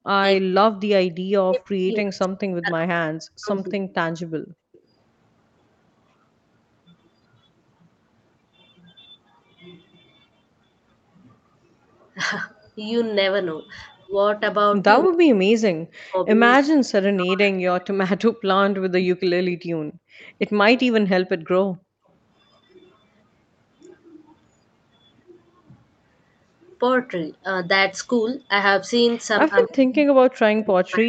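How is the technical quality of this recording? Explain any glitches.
The recording has echo-canceller problems on a speakerphone call: three stretches of suppressed speech, two brief drops in the room sound, and three short echo scraps. The audio also stops at 8 kHz, as the call path's bandwidth allows.

Speech suppressed in double talk at 0 to 3.73 s, 14.08 to 17.98 s and 29.49 s to the end. The likely cause is the far side talking at the same time, so the canceller could not tell the local voice from loudspeaker echo and attenuated both. The voice sinks by roughly 40 dB, affecting about 3 s in each of the first two stretches.

Background gated by the echo canceller at 4.26 to 4.81 s and 19.55 to 22.07 s. While the loudspeaker was active, the canceller clamped the microphone, pulling the room sound down by about 39 dB. It drops out for roughly half a second in the first stretch and about 0.7 s in total in the second, then comes back.

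Echo leak at 4.73 to 4.80 s, 15.02 to 15.08 s and 20.2 to 20.25 s. The canceller left part of the loudspeaker pickup in the signal, likely through imperfect cancellation, so a copy of the voice returns 289 ms late. It is very faint at the first and third spots and fairly prominent, about 10 dB under the speech, at 15.02 s.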